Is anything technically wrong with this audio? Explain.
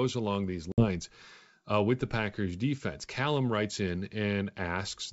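Yes. From 0.72 to 0.90 s, just after "along these", there is packet loss on an ADPCM call on this G.722 wideband link. About 60 ms, a few packets, went missing and was filled with silence. This knocked the decoder's adaptive predictor and step size out of step with the sender's, so a hard-edged gap ends with slightly distorted speech before the sound settles.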